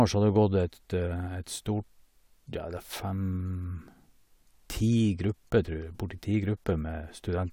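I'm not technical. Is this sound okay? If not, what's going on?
Yes, the recording is technically sound, with nothing wrong in how the signal was captured or played back.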